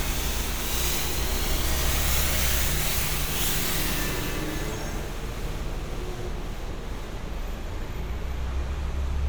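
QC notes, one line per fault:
Nothing stood out on listening to this recording.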